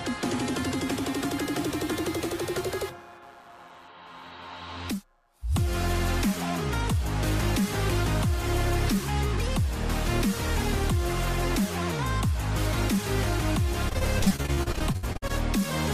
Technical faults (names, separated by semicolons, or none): computer activity noise; repeated packet loss (robotic sound)